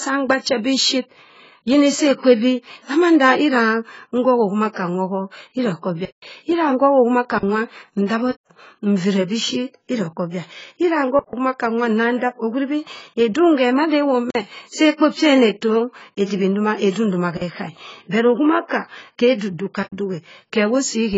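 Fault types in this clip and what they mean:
AAC compression: Throughout the clip, the speech is heavily damaged by low-bitrate coding, likely AAC-LC at around 16 kbps. Nothing is present above 7.6 kHz, so the top of the spectrum is simply missing and the sound is dull. The encoder quantises the frequency content of each frame so coarsely that detail is discarded, leaving the speech smeared, with a warbling, fizzy texture on sustained sounds and sibilants.
block of digital silence: Six dropouts occur at 6.05, 8.31, 11.19, 14.30, 17.37 and 19.83 s, lasting about 171, 186, 139, 46, 46 and 93 ms. Each is a run of zeros played in place of the speech, caused either by the output buffer not being filled in time or by a calculation producing invalid values. The sound cuts out and returns with no fade. Every gap is long enough to be heard as a hole, and the gaps at 8.31, 14.30, 17.37 and 19.83 s span 8192, 2048, 2048 and 4096 samples.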